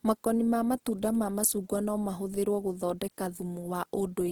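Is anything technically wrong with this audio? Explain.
Yes. Throughout the speech there is plainly audible damage from Opus compression, likely in its CELT music mode at a very low rate, around 16 kbps. Nothing lies above about 20.2 kHz. Starved bands are filled with folded or noisy content. Tones turn grainy, rough and noisy.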